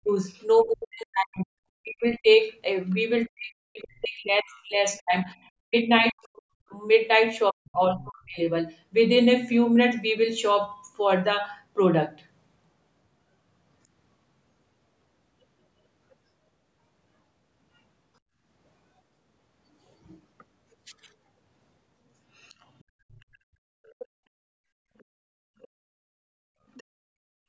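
From the start to 2.29 s the speech is suppressed in double talk. For roughly one and a half seconds of that span the talker's level dips, by about 40 dB at its deepest. The likely cause is the echo canceller failing to separate the talker from loudspeaker echo while both sides spoke, and turning both down. The talker's own speech is what sinks and chops, which sets this apart from the background gating heard later.

The other side's voice leaks through briefly at 0.37 to 0.44 s, at about 40 dB below the speech, and again at 2.90 to 2.95 s, at about 35 dB below. These are faint scraps of a second voice layered under the talker, likely residual loudspeaker echo the canceller left in the microphone signal.

Double-talk suppression returns from 3.27 to 8.39 s, affecting about four seconds. The speech drops, again by about 40 dB at worst.

Leakage is strongest from 22.37 to 24.05 s, a longer stretch only about 20 dB under the speech. 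Shorter scraps follow at 24.99 to 25.03 s (about 40 dB down) and 26.74 to 26.83 s (about 30 dB down). Unlike the suppression faults, this adds sound rather than removing it.

From 25.15 to 26.62 s the background is gated by the echo canceller. The room sound drops out for about a second in total, by up to about 40 dB, while the loudspeaker plays, then comes back when the canceller releases. Here the ambience vanishes, not the talker's speech. The call's microphone processing passes nothing above 8 kHz.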